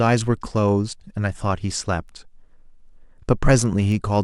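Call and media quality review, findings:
Sharp single-sample ticks, uneven strength, about once a second, 0.24–3.92 s, about five in all. Word clock ticks: unlocked digital receiver clock drifting roughly 20 ppm, dropping or repeating a sample per slip.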